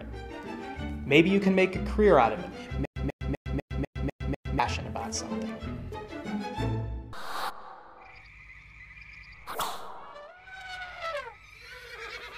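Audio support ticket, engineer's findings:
Stutter with silent gaps, 2.85 to 4.59 s. Same 140 ms fragment repeats 7 times, each followed by about 109 ms of dead digital silence, steady 249 ms period. Likely a player or stream stall replaying the last buffered chunk on each retry. Unlike plain dropouts, the content repeats. Unlike a seamless loop, true silence separates the repeats. Audio from that stretch is lost.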